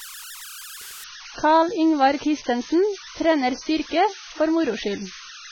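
Speech with converter idle tones throughout: an undithered delta-sigma converter settles into repeating bit patterns, leaving a tone around 1.5 kHz about 16 dB below the signal. From 1.04 s to the end, the audio suddenly drops to what sounds like an adaptive stream at a lower bitrate, with nothing above 6.5 kHz and heavier codec artefacts, consistent with a fall from roughly 96 to 16 kbit/s AAC.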